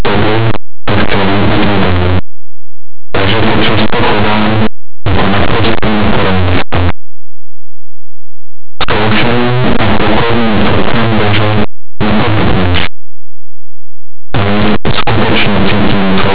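Throughout the whole clip, the speech suffers from linear audio read as companded. Plain 8-bit samples are expanded as mu-law codes, so tiny values on one side of zero jump to the largest outputs. The result is very loud, harsh distortion, a waveform of dense slabs, and broadband smear across the spectrogram.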